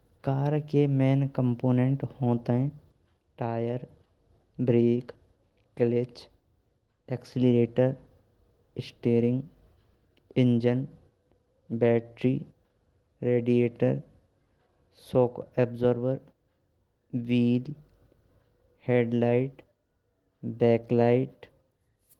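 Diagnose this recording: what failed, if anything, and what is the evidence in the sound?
The failure sits in the network receive path, specifically the jitter buffer: clock drift between sender and receiver. The sending device's audio clock runs around four percent fast, so samples arrive quicker than the receiver plays them out. The buffer keeps filling, and the receiver has to discard material to hold latency down. The effect persists across the whole speech clip rather than appearing as one isolated glitch.

The repeated timing corrections are the audible evidence, running from 0.27 s to 21.97 s with the speech moving at 104% of normal pace. Each correction trims a short slice of audio to drain the surplus. Because the drift always pushes the same way, every edit is a cut, not a repeat. They land at uneven intervals, producing slight hiccups and an unsteady, faintly hurried tempo rather than clean, regular dropouts.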